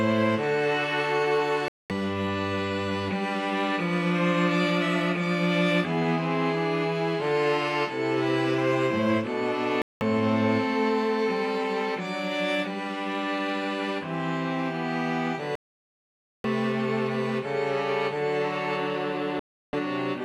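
Four digital broadcast dropouts break up the sound: 1.68 to 1.90 s, 9.82 to 10.02 s, a longer one from 15.55 to 16.45 s (nearly 0.9 s), and 19.39 to 19.74 s. Each time the receiver seems to lose the signal or reject corrupted frames, so it simply mutes until clean data arrives. You hear the sound cut or quickly fade to silence and pick up later, with whatever was broadcast in those gaps gone for good.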